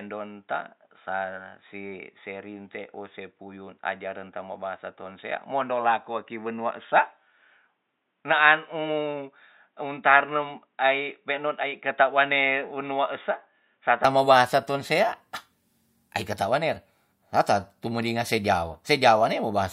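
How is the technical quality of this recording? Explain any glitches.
The recording is band-limited for its first 14 seconds. From 0.0 to 14.0 s nothing above 3.8 kHz comes through, so the speech sounds dull and boxy, most likely because the input had switched to a poorer device. At 14.0 s the full band returns abruptly, with no gap and no level jump, and the poorer device's faint noise floor, roughly 55 dB down, goes away. That sudden switch sets it apart from steady low-pass filtering.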